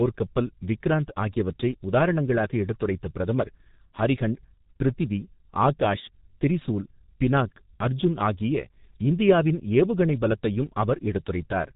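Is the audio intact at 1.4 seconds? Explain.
No. At 1.4 s the speech carries G.723.1 codec damage, present throughout the clip. The degradation is heavy, at about 6.3 kbit/s, with 30 ms frames. Nothing above 4 kHz survives, which leaves the speech muffled, and the slowly updated voice model makes it hoarse, with smeared consonants.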